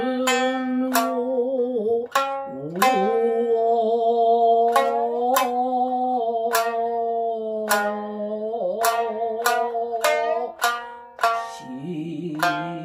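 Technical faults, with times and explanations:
No technical faults can be heard in this audio, so there are no times or explanations to give.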